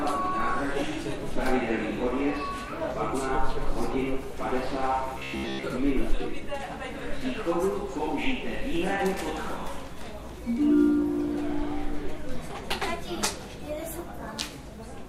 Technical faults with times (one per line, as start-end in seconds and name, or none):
5.19-5.68 robotic sound from repeated short buffers